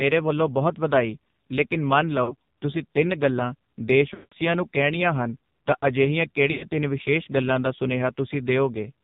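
From start to finish the speech sounds buzzy, synthetic and boxed in, with nothing above 4 kHz and a heavily processed edge to every syllable. That is the AMR narrowband mobile codec at a low rate, with a degree of damage that fits the 5.9 kbps mode: the audio is sampled at 8 kHz and rebuilt from a vocal tract model fed by only a few pulses per subframe, so fine detail and natural breathiness are lost.

Three dropouts break in. At 2.24 to 2.35 s the sound dips and warbles briefly. At 4.14 to 4.33 s the sound smears out, stretches and fades almost to silence before returning weak and rough. At 6.52 to 6.63 s a shorter stretched fade occurs. These are lost AMR speech frames. When frames fail their checksum, the decoder repeats the last good pitch and vocal tract settings with falling gain. The lengths suggest about 40 ms, 180 ms and 100 ms of missing audio.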